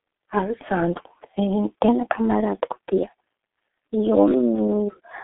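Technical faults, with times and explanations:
throughout, G.723.1 codec: the speech sounds muffled and rough, with smeared consonants and nothing above about 3.7 kHz, as on a narrow phone line. The codec squeezes it to roughly 6.3 kbit/s in 30 ms frames, rebuilding the voice from a coarse, slowly updated model.
1.88 s to 5.24 s, section at the wrong speed: from here to the end the speech turns hurried and higher, about two semitones up, running 1.13 times too fast. Pitch and tempo shift together, likely because this part was played against the wrong clock.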